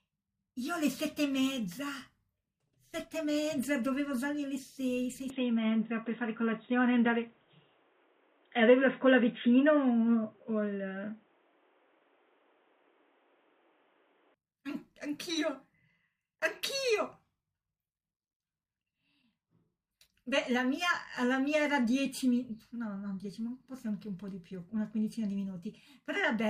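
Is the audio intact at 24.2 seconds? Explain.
Yes, at 24.2 seconds the speech runs without any audible fault.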